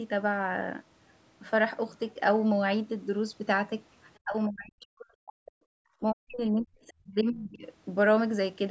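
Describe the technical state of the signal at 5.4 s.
Speech suppressed in double talk runs from 4.22 to 5.58 s, so 5.4 s falls inside it. The speech dips sharply, at its deepest by about 40 dB, for about a second in total across the span. The likely cause is an echo canceller that could not separate the near talker from loudspeaker echo while both sides spoke, so it attenuated everything. The band stays limited to 8 kHz, as the call microphone processing sets it.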